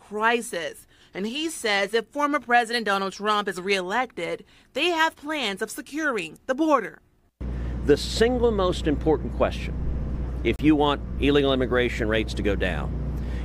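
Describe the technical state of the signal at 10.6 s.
At 10.56 to 10.59 s the signal drops into a block of digital silence: 30 ms of silence, likely because the output buffer went unfilled in time. Unlike a faded dropout, it stops and resumes abruptly, leaving a short hole.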